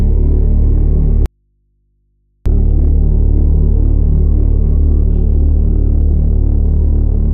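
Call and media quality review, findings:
Audio dropout to a faint residue, 1.26–2.46 s. Signal lost for 1.2 s, abrupt cut out and back in, not a fade. Gap holds only mains hum, roughly 50 dB below normal level. Likely cause: upstream source disconnected while the input stage stayed live, so the open input picked up hum.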